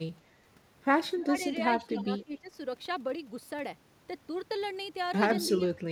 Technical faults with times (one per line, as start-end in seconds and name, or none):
1.15-2.57 speech suppressed in double talk
1.96-2.39 echo leak
5.58-5.67 speech suppressed in double talk